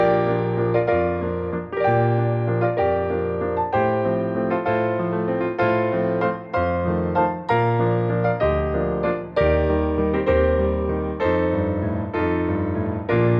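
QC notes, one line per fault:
No technical faults can be heard anywhere in the audio.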